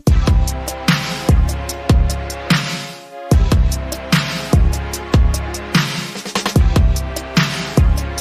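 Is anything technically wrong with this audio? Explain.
No, nothing technically wrong stood out on listening to this audio.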